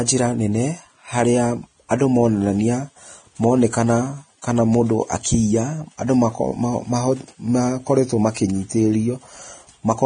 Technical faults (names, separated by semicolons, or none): Vorbis compression; pre-echo